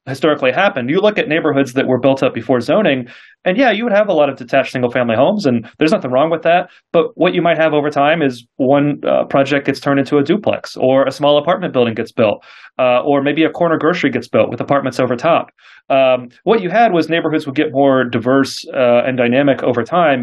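No technical faults can be heard anywhere in this clip.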